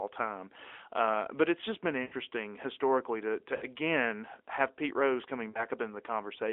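Lost AMR speech frames break up this narrowband AMR call speech three times. From 2.02 to 2.14 s, right after "but it's just been", about 100 ms drops out. The decoder repeats the last good pitch and vocal tract shape at falling gain, so the sound smears and fades. At 3.56 to 3.65 s, after "historically to to", a shorter run of about 60 ms is drawn out and fades. At 5.50 to 5.65 s, about 40 ms is lost before the voice returns weak.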